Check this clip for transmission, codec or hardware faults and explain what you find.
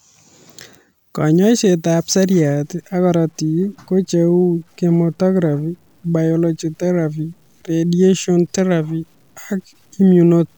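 One fault is present in this speech clip: low bit depth without dither, from 2.63 s to the end. The audio turns grainy, with a rough distortion riding on the signal at roughly 45 dB below it. The likely cause is truncation to about 9 bits without dither, so the error follows the waveform and quiet passages sound gritty.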